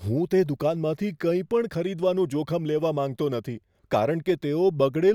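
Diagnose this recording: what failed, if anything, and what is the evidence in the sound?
A repeated buffer at the driver or buffer stage is the failure here. At 1.02 s there's a click in the speech. The playback side didn't get fresh audio in time, so it played its last chunk once more before carrying on. That slice is so short, consistent with a buffer of about 5 ms, that the repeat doesn't register as a stutter, just the hard seam. It looks like nothing was actually dropped, only doubled.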